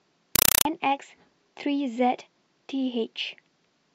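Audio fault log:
0.36–0.65 s, compressed stream played as audio: an AC-3 bitstream, which fits a 192 kbps stream, went out undecoded and was read as plain samples. Each frame became a 4 ms noise burst then zero padding, repeating 31.25 times a second as loud chattering static in place of the speech.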